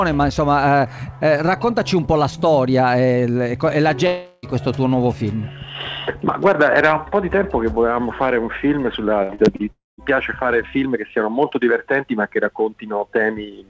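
Two stretches sound like a long network dropout, the likely cause being a run of audio that never arrived. From 4.07 to 4.46 s, roughly 360 ms is bridged by a fading continuation of the last sound with no silence. From 9.71 to 10.01 s, a similar buzzy fill gives way to about 170 ms of silence before the audio resumes with the gap missing. Between 9.23 and 9.62 s there is repeated packet loss, heard as a robotic sound. Four short holes, the longest 64 ms, are patched one after another, so about 39% of that span is concealed and comes out choppy. The dropouts differ because each is a single continuous gap that fades out. The packet loss is a quick series of brief breaks. The band stops at 8 kHz, which fits a G.722 wideband call codec.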